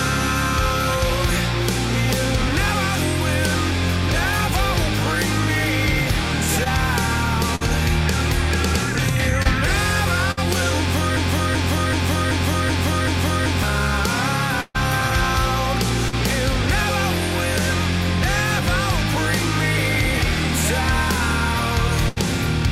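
Short concealed packet loss at 6.64 to 6.67 s and 9.43 to 9.47 s: roughly 20 ms of audio failed to arrive, and the receiver bridged the gap by extending the preceding sound for about 18 and 26 ms. Each is a brief smear or wobble before the signal resumes.

A burst of packet loss follows at 7.55 to 7.63 s and again at 10.31 to 10.39 s. About 40 and 60 ms of audio went missing, covered by roughly 50 to 60 ms of fading continuation. The result is a short held buzz or decaying hiss, after which the sound jumps ahead.

From 11.17 to 13.63 s a broken-record loop repeats a 0.38 s fragment six times back to back. The likely cause is a stalled player or stream resending its last buffered piece. The material that belonged in that span is lost.

A longer burst at 14.61 to 14.76 s drops about 140 ms. The concealment holds for roughly 134 ms, then the sound briefly goes silent for about 20 ms.

Another short concealed loss at 16.08 to 16.14 s fills about 40 ms, leaving a wobble.

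A final burst at 22.08 to 22.18 s removes about 80 ms behind a fading fill.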